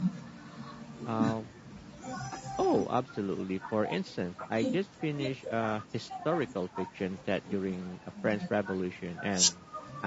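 Throughout, the speech sounds rough and grainy, with noise filling the gaps between harmonics, which points to low-delay AAC compression, likely AAC-ELD at around 32 kbps. Nothing sounds above 8 kHz.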